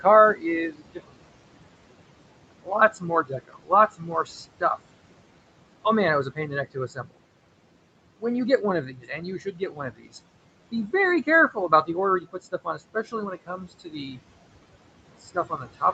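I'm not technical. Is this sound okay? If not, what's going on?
No, not quite. There's background noise in the room, and the call's noise suppressor is working hard to get rid of it all the way through. That leaves noise suppressor artifacts: the background drops away in the gaps and creeps back up under the talking. The voice itself can come across a bit thin as a result.

The bigger issue is speech cut by the noise suppressor. In places the suppressor mistakes bits of the voice for background noise and turns them down along with it, so soft sounds and word endings go faint or seem swallowed. That happens in seven stretches: 0.01 to 1.14 s, 2.62 to 4.8 s, 6.24 to 7.19 s, 8.61 to 10.15 s, 10.71 to 11.89 s, 12.2 to 14.18 s, and from 15.2 s to the end. Within each stretch only parts are hit, from a brief moment up to around a second in total, and the one near 11 s is the mildest.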